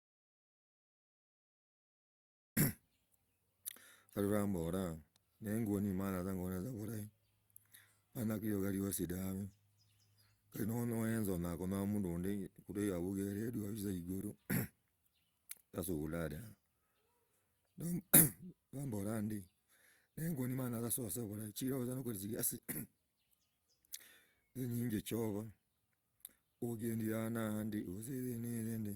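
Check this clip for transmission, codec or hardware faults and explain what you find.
One fault is present: an audio dropout to silence from the very start until 2.57 s. The speech begins with dead silence, no room tone at all, then cuts in mid-flow. The input was likely lost, a disconnected or muted source, while silence kept being written.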